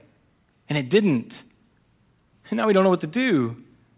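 No technical faults can be heard anywhere in this speech recording. Nothing in the audio points to a problem at any moment.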